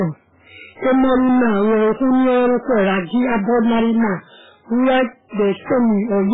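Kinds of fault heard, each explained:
Hard clipping: the speech is driven about 16 dB past what a stage can pass, so roughly a third of the samples are cut flat. The squared-off tops add high harmonics, giving a harsh fuzz over every loud syllable throughout the clip.
MP3 compression: the treble stops sharply, with nothing above 3.8 kHz, and the coding damage is heavy, with a watery, swirling texture as weak frequency lines drop in and out. This likely comes from MP3 encoding at a very low bitrate, which fits about 8 kbps.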